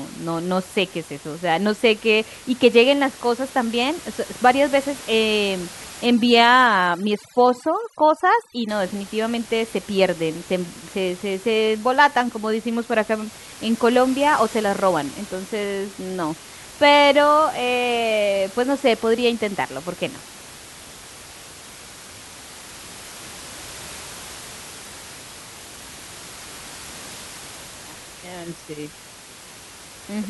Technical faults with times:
6.06-8.69 overdone noise removal

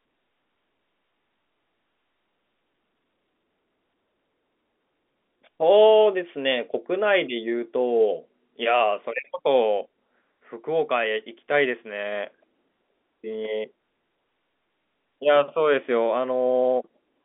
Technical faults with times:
none

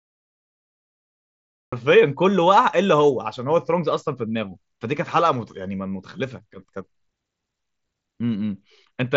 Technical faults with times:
0.00-1.72 cut-off start

